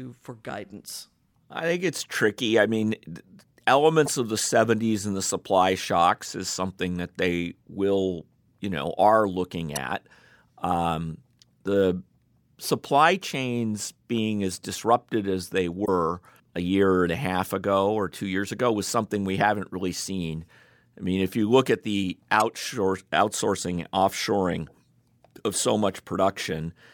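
Damaged data in the compressed stream at 4.06–4.08, 9.75, 15.82–15.89 and 22.40–22.42 s makes the decoder lose frame sync, giving brief glitches.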